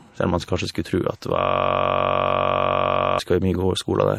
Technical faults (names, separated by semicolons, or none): transcoding between lossy codecs; system hang loop